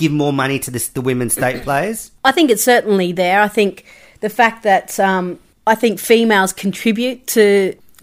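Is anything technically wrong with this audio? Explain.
No, nothing is technically wrong with this audio.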